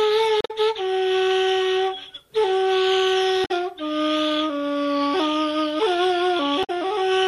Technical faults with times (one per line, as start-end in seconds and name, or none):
0.38-0.51 damaged data in a compressed stream
3.44-3.51 damaged data in a compressed stream
6.63-6.70 damaged data in a compressed stream